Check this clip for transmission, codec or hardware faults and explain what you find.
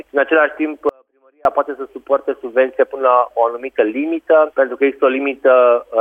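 One fault is present, an audio dropout to a faint residue. From 0.89 to 1.45 s the signal abruptly vanishes for about 0.56 s, leaving only a faint leak roughly 35 dB down, likely a momentary break upstream while the downstream path stayed live.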